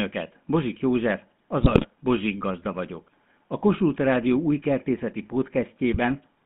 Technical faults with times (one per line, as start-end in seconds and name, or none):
0.00-6.45 GSM full-rate codec
1.62-1.87 GSM bit errors
5.93-5.98 GSM bit errors